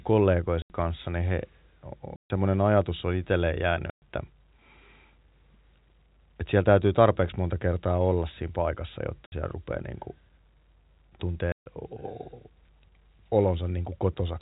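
At 0.62 to 0.70 s, just before "kanssa niin he", the speech drops into dead silence, followed by gaps at 2.16 to 2.30 s (ending at "ajatus on itselleen jäänyt"), 3.90 to 4.02 s (right after that phrase), 9.26 to 9.32 s and 11.52 to 11.66 s. This is packet loss filled with silence: lost packets were replaced by nothing. The gaps of 60 to 140 ms are all multiples of 20 ms, which fits 20 ms packets and sets this apart from irregular buffer dropouts. Each edge is hard, with no smoothing or repeated sound as concealment would give, over the narrowband G.711 telephone sound.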